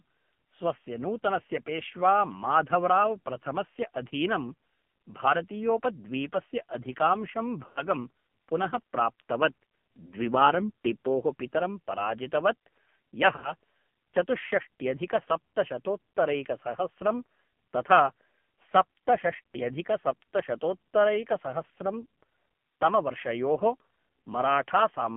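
Throughout, the AMR narrowband mobile codec confines the speech to roughly 150 Hz to 3.4 kHz, with heavy buzzy, synthetic damage that points to a low mode around 5.9 kbps. Lost AMR speech frames occur from 7.66 to 7.82 s and from 13.36 to 13.52 s. The decoder stretches the last good sound and fades it over about 100 ms and 80 ms, consistent with five and four 20 ms frames.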